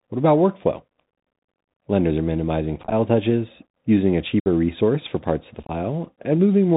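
Throughout, the speech sounds muffled and scratchy, with nothing above 4 kHz, harsh s sounds and a granular hiss beneath. This is the Bluetooth CVSD headset codec at 64 kbps, whose one-bit adaptive steps cannot keep up with loud high sounds.

From 2.83 to 2.93 s, just after "are minimizing", the speech turns crackly and chopped. About 49 ms drops out in scattered gaps across 90 ms, none longer than about 11 ms.

At 4.40 to 4.46 s, after "touches using a", a clean-edged 60 ms hole opens and the speech returns briefly quieter.

From 5.62 to 5.71 s, after "for parts of the", the speech becomes rough again, with 45 ms lost over 67.5 ms and a longest gap of 22.5 ms.

All three are unconcealed Bluetooth headset packet loss. Short voice packets between headset and phone were dropped and replaced by silence or an idle pattern, with roughly ten to fifteen packets lost in each burst.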